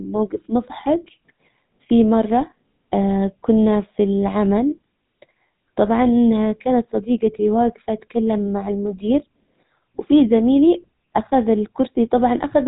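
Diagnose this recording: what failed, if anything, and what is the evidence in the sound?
GSM full-rate codec damage runs throughout, from the codec stage. The speech sounds buzzy and gravelly with nothing above 4 kHz, which fits a 13 kbit/s GSM full-rate stream that rebuilds the voice from a vocal-tract model fed by sparse, evenly spaced pulses.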